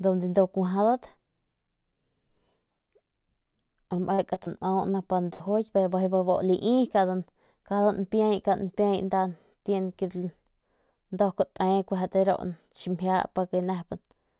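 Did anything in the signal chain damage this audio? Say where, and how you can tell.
Yes, at the network stage. From 3.96 to 4.48 s the speech turns choppy: four separate dropouts, the longest 40 ms, totalling about 100 ms. Each was patched by extending the preceding sound, so about a fifth of that stretch is synthetic. This is repeated packet loss.

A burst of packet loss at 5.34 to 5.42 s removes 60 ms of consecutive audio. The receiver sustained the last sound and faded it, giving a brief held buzz or hiss before the speech resumes slightly further on, with the intervening piece gone.

Two short concealed packet losses, at 4.92 to 4.96 s and 5.66 to 5.70 s, each drop about 20 ms. The gaps were bridged by continuing the prior waveform and crossfading back, heard as a quick smear or wobble over narrowband audio with nothing above 4 kHz, consistent with a G.711-type call codec.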